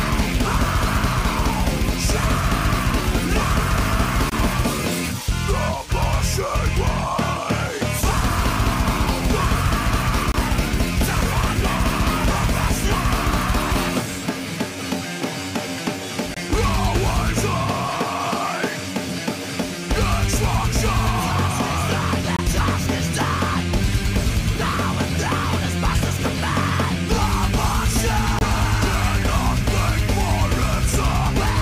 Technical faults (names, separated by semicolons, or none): gap between chunks